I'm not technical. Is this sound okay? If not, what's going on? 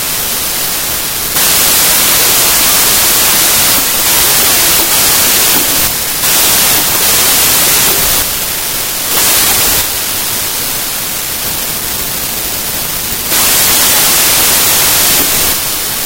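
No. From start to finish the speech is buried under loud, harsh noise and runs about a third too fast, so it sounds higher-pitched than it should. This is a wrong sample width fault: the audio was stored in 3-byte pieces but is being read back in 4-byte pieces. Most numbers get built from mismatched bytes and turn into noise, and the misreading also makes it play 1.33 times too fast.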